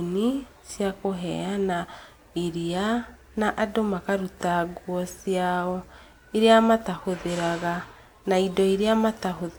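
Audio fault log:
throughout: generation loss. The speech has likely passed through a lossy codec several times, around three rounds of decoding and re-encoding, with a character that fits WMA at about 128 kbit/s. Each pass requantises on a shifted frame grid, so noise and spectral gaps pile up rather than cancel. The result is a swirly, hollow, smeared tone, with consonant attacks softened, and nothing above about 20.1 kHz.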